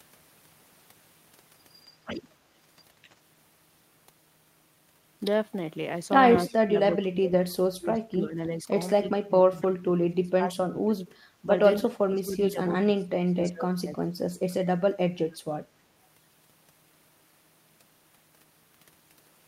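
The speech sinks and breaks up in patches from 6.5 to 8.67 s, 9.01 to 11.16 s, 11.42 to 11.47 s, 11.82 to 12.6 s and 12.83 to 14.16 s. The deepest dips reach roughly 30 dB, about 25 dB in the second stretch, and only a slight 5 dB or so in the brief third one. This is speech suppressed in double talk, likely an echo canceller that mistook the talker for loudspeaker echo while both sides spoke and turned everything down.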